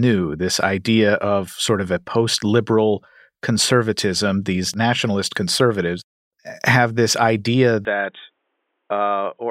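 Speech that abruptly turns dull and boxy at 7.85 s and stays that way to the end, likely an input switched to a poorer device. A spectrogram shows everything above 3.8 kHz vanishing with no gap. The waveform drops about 5 dB, and a faint new noise floor appears.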